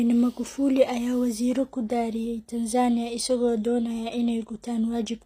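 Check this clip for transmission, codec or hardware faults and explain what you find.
There's one codec fault, running through the whole clip. The speech sounds like HE-AAC compression at a low rate, around 24 kbps: nothing above 15.4 kHz, and the treble is likely rebuilt by band replication, so the s sounds come out gritty and metallic.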